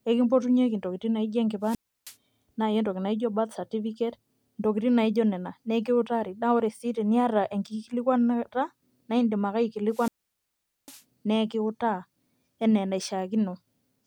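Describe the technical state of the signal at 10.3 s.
A brief swell of hiss, then near silence for about 0.8 s before the speech returns: a wireless microphone squelch dropout from 9.90 to 11.02 s, where the fading radio signal triggered the receiver's squelch mute.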